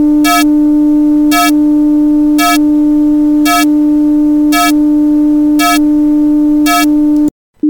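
There are no technical faults to describe in this audio.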